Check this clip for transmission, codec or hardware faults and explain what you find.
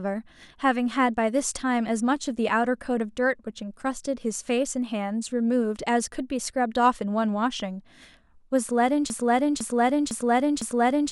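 One fault is present: a broken-record loop that runs to the end of the speech clip. From 9.1 s onward, a fragment about 0.5 s long (505 ms) repeats exactly, back to back, four times. The likely cause is a stalled player, encoder or stream that kept resending the last piece it held. The speech that should have filled those final two seconds is lost. It sounds like a stuck, stuttering cycle that never resolves.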